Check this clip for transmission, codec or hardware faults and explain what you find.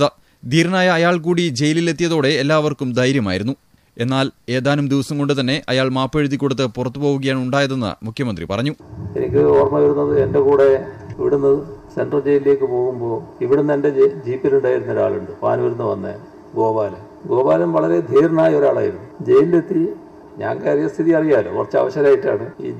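Nothing stood out on listening to this clip.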